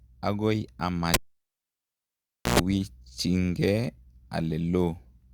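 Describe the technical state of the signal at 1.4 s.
At 1.4 s the cable has been pulled and is plugged in again only later: after a pop at 1.14 s the signal sits near silent for about 1.41 s, then a 115 ms burst of 60 Hz mains buzz and a second pop at 2.59 s mark reconnection.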